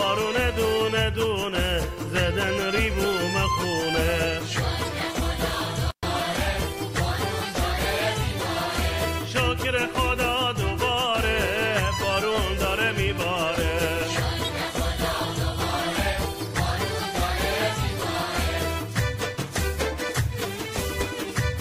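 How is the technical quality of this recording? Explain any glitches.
There is one glitch, an intermittent contact, at 5.91 to 6.04 s. A loose connection opens for about 110 ms. The sound drops out abruptly, with crackle at each edge. Faint hiss remains until the contact closes again.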